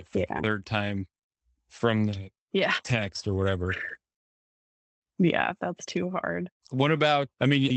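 Nothing's wrong with this speech clip; it just carries the usual sound of a call path, with the audio band topping out around 8 kHz.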